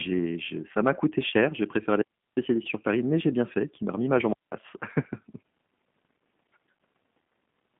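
From start to finish the speech sounds thin, slightly rough and synthetic, with a buzzy, processed edge and no air or sibilant brightness. Nothing is heard above about 3.8 kHz, and the low end stops near 150 Hz. This is the G.729 codec, damage plainly audible: each 10 ms frame is rebuilt from a vocal tract filter, a pitch predictor and a few pulses, which fits an 8 kbit/s G.729A telephone link.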